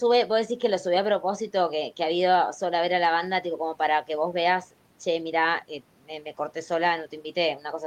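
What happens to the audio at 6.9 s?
Nothing goes wrong at 6.9 s: the speech continues without any audible dropout, click, distortion or other fault at that point.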